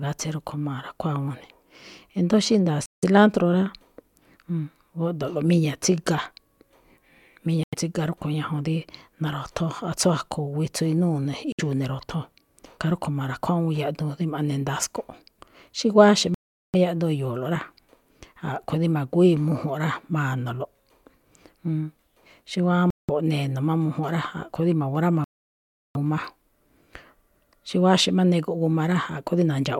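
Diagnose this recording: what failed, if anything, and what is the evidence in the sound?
The speech halts at 2.86, 7.63, 11.52, 16.34, 22.90 and 25.24 s, with silences of 63 to 709 ms. Each time the sound cuts to silence and then picks up again. This is likely a Bluetooth stall: the headphone buffer ran dry awaiting resent packets.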